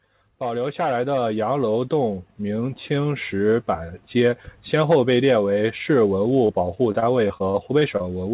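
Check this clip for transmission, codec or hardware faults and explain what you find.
Two faults stand out in this speech clip: a slow automatic gain rise early on, and a burst of repeated packet loss near the end.

From 0.39 s to 3.96 s, automatic gain rising: the gain control judged the input too quiet and raised its amplification step by step, by about 10 dB in total. The voice and the room noise behind it swell together over those three and a half seconds, so the level creeps upward rather than jumping. The noise floor climbs in step with the speech.

From 6.46 s to 8.02 s, repeated packet loss (robotic sound): packets went missing nine times in this stretch, none of the holes longer than 28 ms. Each gap was filled by extending the preceding sound, and about 11% of the span is patched this way. With the holes arriving in quick succession, the speech turns choppy and takes on a robotic edge, with small pieces of it missing. 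The band-limited sound, with nothing above 4 kHz, points to a narrowband G.711 mu-law call path.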